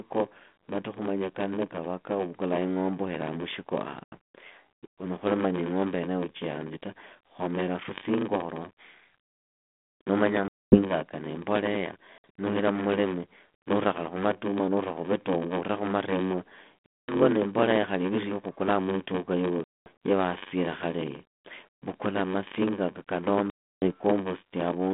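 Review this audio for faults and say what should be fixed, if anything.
Block size mismatch (padded) runs throughout: a steady 93.8 Hz buzz with audio slowed to 0.861 speed at normal pitch, which fits short blocks zero-padded into a 512-sample read. Match the writer's block size to the reader's, or buffer samples instead of padding each block.

Packet loss on an ADPCM call leaves hard-edged silent holes at 4.05 s (80 ms), 10.48 s (240 ms), 12.18 s (60 ms), 16.86 s (220 ms), 19.64 s (220 ms) and 23.5 s (320 ms). After each hole the speech returns briefly and slightly distorted while the decoder's predictor resynchronises with the G.726 sender. Add jitter buffering with loss concealment, and reset or resync the decoder state after each gap.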